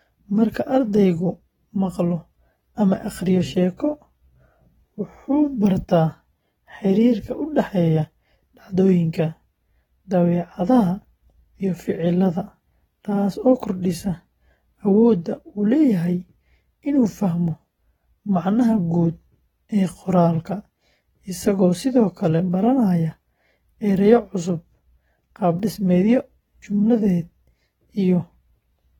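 Throughout the speech, the sound is dull and smeared, with a plainly audible warbling, fizzy texture on sustained sounds and sibilants, and nothing above about 19.3 kHz. The likely cause is AAC compression: AAC-LC quantises each frame's spectrum against a hearing model, and when bits run short it drops or substitutes detail in bands it judges less audible, leaving holes that shift from frame to frame. The damage fits a low bitrate of around 24 kbps.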